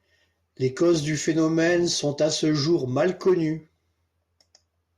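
Listening through this speech recording, nothing stood out as a technical fault at any point.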